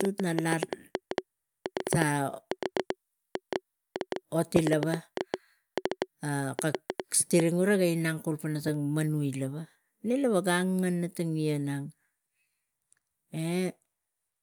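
From the very start at 0.01 s through to 7.41 s, a train of clicks sits on top of the speech, about six per second but unevenly spaced, so it's a ragged ticking rather than a steady beat. That's around fifty near-identical pops, peaking well above the speech itself, and they carry straight through the pauses. It stops just before "e rega". The likely cause is interference from nearby gear or a faulty connection or power supply.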